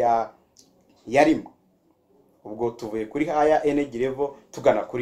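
Throughout the clip, a filter restarted on every block produces a steady 100 Hz buzz. The filter discards its state at each block boundary and starts again from silence, so every 10 ms block opens with a small transient, and these ticks fuse into a buzz that rises and falls with the sound's level.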